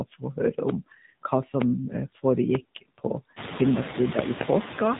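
A noise suppressor runs throughout, pulling down whatever frequency bands it judges to be steady noise by about 17 dB, frame by frame. The background therefore dips in the gaps and rises again under the speech.

At the same time the signal has passed through the AMR narrowband mobile codec at 7.4 kbps. This low rate forces the vocal-tract model to work from very few pulses per frame, and nothing above 4 kHz survives. The speech sounds plainly muffled, buzzy and synthetic, and the residual noise swirls.

From 0.10 to 0.38 s the suppressor mistakes part of the speech itself for noise and turns it down along with the background, by up to about 11 dB. Roughly a tenth of a second of sound in that span comes out swallowed and faint.

At 1.62 to 1.64 s a single loud pop cuts in, around 20 dB above the surrounding sound. A sudden voltage step is the likely cause, such as a switch, a plug or static, with the speech carrying on underneath. 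Between 4.19 and 4.43 s two more pops of similar strength arrive in quick succession. Before that second pair, at around 3.5 s, the room noise rises by about 21 dB and then stays about 10 dB below the speech.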